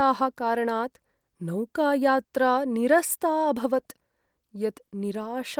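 No technical faults are audible anywhere in the speech recording.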